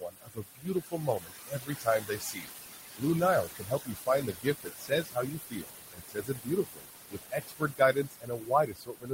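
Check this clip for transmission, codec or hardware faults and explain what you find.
The main problem is an overworked noise suppressor, which leaves processing artefacts across the whole clip and repeatedly eats into the speech itself.

Noise suppressor artifacts run from start to finish. The suppressor pulls down whatever it classifies as steady noise, frame by frame, cutting it by about 16 dB. The room noise, sitting about 8 dB under the speech, pumps up and down around the talking.

Speech cut by the noise suppressor shows up at 0.0–2.64 s, 2.94–3.03 s, 3.44–5.74 s, 5.9–6.86 s and 7.09 s to the end. The suppressor mistakes parts of it for background and drops them by about 21–22 dB. Soft consonants and word tails come out swallowed or faint.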